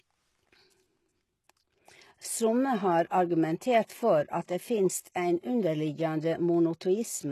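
From start to finish, the sibilants in the speech come out gritty and lisping, with a metallic sheen over the top end and nothing at all above about 12.3 kHz. The treble sounds bright yet synthetic, as though copied rather than captured. That is the signature of HE-AAC compression, likely at a very low rate near 16 kbps, where spectral band replication rebuilds the upper band from lower bands, so its harmonics fail to line up with the coded part below.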